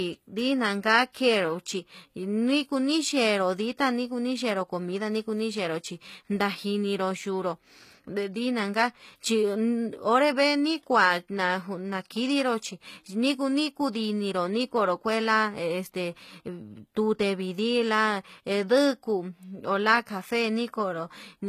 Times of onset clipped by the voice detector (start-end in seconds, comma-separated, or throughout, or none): none